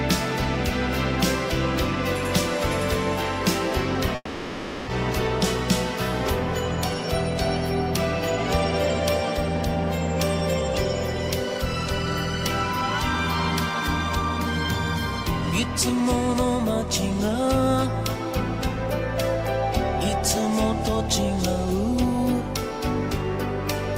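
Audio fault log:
4.15–4.90 s long network dropout: 0.72 s of fading buzzy fill, then brief silence, likely from lost packets; spectrogram shows smeared, decaying bands.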